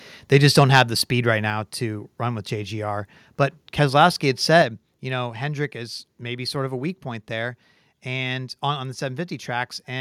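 From 0.34 to 0.81 s, before "the speed right", microphone overload flattens peaks about 5 dB over full scale, roughly one percent of samples, likely from excessive input gain, giving harsh crackle. At 4.62 s, just before "you know", the microphone volume steps down by about 6 dB, likely an automatic gain reduction, dropping speech and background together.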